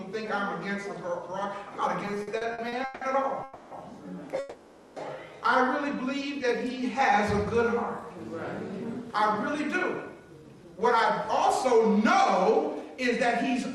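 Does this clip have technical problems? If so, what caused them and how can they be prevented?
Yes. Between 2.05 and 3.03 s there are repeated stalls (stutter): late packets drained the jitter buffer ten times, with the last sound stretched to fill about 400 ms in total, the longest gap 170 ms. A deeper, adaptive jitter buffer would absorb this.

Two call audio freezes follow, at 3.43 to 3.73 s (280 ms) and 4.39 to 4.98 s (570 ms). The held sound was likely from packets stuck in transit, so a gap was inserted while nothing was lost. Prioritising the media traffic (QoS) on the network path would help prevent them.

Then the jitter buffer speed-up kicks in at 8.46 to 10.79 s, running at 107%, and again at 11.24 to 12.18 s at 103%. The receiver trimmed pitch-period slices to shed the backlog, around a fifth of a second in the first stretch and a few tens of milliseconds in the second, so the first stretch feels hurried. 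Gentler buffer-shrink settings would spread that catch-up out more smoothly.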